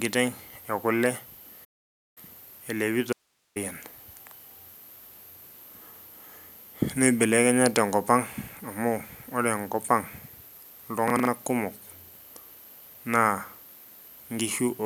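A speech clip with two separate breaks in the sound. From 1.64 to 2.18 s there is a playback stall: the speech halts mid-flow for about 0.52 s of true silence and then resumes, likely because the player ran short of data or its output thread was held up. On a waveform this shows as a flat line between two clean edges, and on a spectrogram as a fully blank vertical band across all frequencies. From 3.13 to 3.56 s comes an audio dropout to a faint residue: the speech cuts off abruptly for about 0.43 s, but the output doesn't go dead. Only a low hiss remains, roughly 45 dB below the speech, likely because the signal feeding the chain was lost while everything downstream stayed live. The waveform narrows to a thin fuzzy strip rather than a flat line, and the spectrogram shows a faint, even wash of broadband noise across the gap instead of empty space, with sharp boundaries on both sides.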